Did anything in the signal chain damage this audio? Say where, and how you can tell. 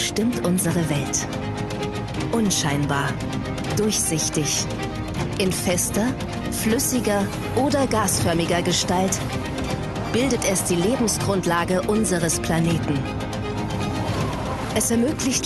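No, nothing in the chain did any damage here; it's just gone through an ordinary call path with an Opus codec at 32 kbps, which you can hear in the top end rolling off at around 12 kHz, exactly as that setting should.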